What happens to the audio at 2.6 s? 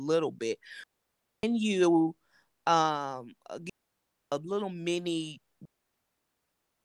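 Nothing goes wrong at 2.6 s; the speech carries on intact through that moment with no audible fault.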